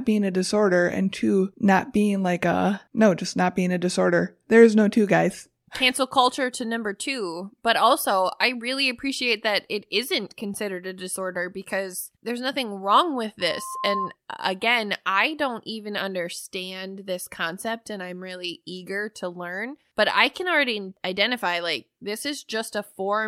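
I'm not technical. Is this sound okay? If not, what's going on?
No. From 13.4 to 14.15 s there is a loudspeaker feedback squeal: a microphone picks up its own loudspeaker, and a 1 kHz tone swells over about half a second to roughly speech level. It stops just before "uh again I don't".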